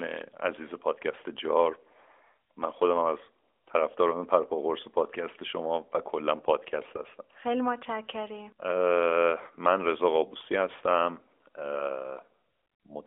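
No technical faults can be heard in the speech, which comes through a narrowband mobile line.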